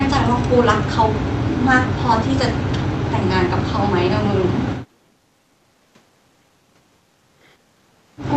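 Around 4.88 to 4.95 s there's a brief, shallow dip in the speech, around 5 dB down for roughly 70 ms. It's likely speech suppressed in double talk: the echo canceller couldn't separate the talker from the overlapping far-end echo and ducked both. The Opus call path tops out near 8 kHz.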